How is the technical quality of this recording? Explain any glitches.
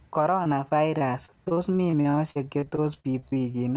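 The recording has a clear fault: from 0.44 s to 3.56 s the speech is broken up by repeated packet loss (robotic sound). Across that stretch there are about two dozen short dropouts, the longest 48 ms, and roughly a fifth of the span is filled in rather than real. Each time a packet goes missing, the receiver stretches the last good fragment to cover the hole. So the speech turns choppy, with syllables clipped. On a waveform the envelope looks chopped and periodic in patches. On a spectrogram, smeared, repeated horizontal striping replaces normal harmonic movement. Everything sits below 4 kHz, which fits a narrowband call codec like 64 kbps G.711 A-law.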